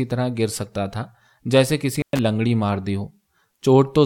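A speech recording with an intermittent contact between 1.96 and 2.19 s: a loose connection opens for about 112 ms, dropping the signal to faint hiss with crackle at both edges.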